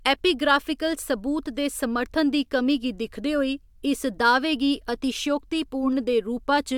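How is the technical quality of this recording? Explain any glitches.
No glitches can be heard anywhere in the recording; the speech signal stays continuous and steady throughout, with no audible technical faults.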